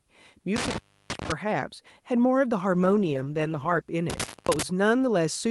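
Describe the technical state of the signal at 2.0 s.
At 2.0 s the speech is intact, carried through the WebRTC call path with no dropout, glitch or other fault at that moment.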